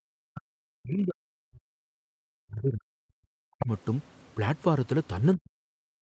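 Between 0.02 and 0.57 s, 0.77 and 1.92 s, 2.41 and 3.69 s, and from 5.29 s to the end of the clip, the speech is heavily attenuated, at its deepest by about 40 dB. In places it is chopped into fragments and in others it nearly vanishes. This is speech suppressed in double talk, the likely cause being an echo canceller that could not tell the near talker from loudspeaker echo while both sides spoke, so it pushed everything down.

From 3.59 to 3.66 s, near the end of the third suppressed stretch, a brief scrap of a second voice comes through at roughly 10 dB below the speech level. This is the other side's voice leaking through, likely residual loudspeaker echo that the canceller failed to subtract from the microphone signal. It is short enough to sound like a clipped fragment rather than a sentence. The audio's upper limit of 8 kHz throughout fits the Opus call path.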